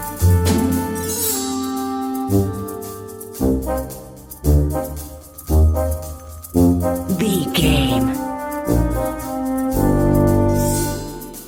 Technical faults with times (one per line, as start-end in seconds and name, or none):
none